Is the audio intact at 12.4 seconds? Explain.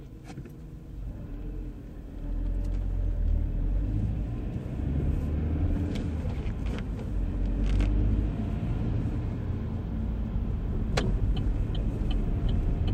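Yes, the sound at 12.4 seconds is intact, with no fault to be heard at that moment.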